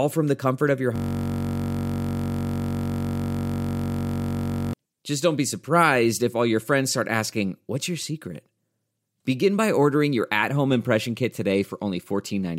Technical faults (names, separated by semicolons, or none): system hang loop